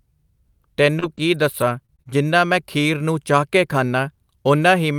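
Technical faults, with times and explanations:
0.89–2.09 s, repeated packet loss (robotic sound): five short gaps, longest 33 ms, each patched by extending the preceding sound. About 100 ms of speech vanishes, sounding choppy. A spectrogram shows frozen, smeared harmonic slices with abrupt joins, and the waveform shows repeated cycles.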